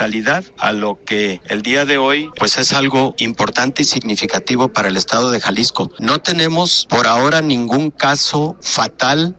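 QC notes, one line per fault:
Nothing stood out on listening to the clip.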